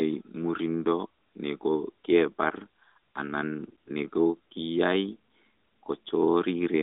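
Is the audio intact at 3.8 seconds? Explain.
No. From 3.68 to 3.89 s the sound has AMR bit errors, consistent with about ten 20 ms frames. Roughly 5 percent of the weakly protected bits are corrupted, misplacing excitation pulses and skewing pitch, gain and spectral detail, so the audio turns hoarse, scratchy and gargly.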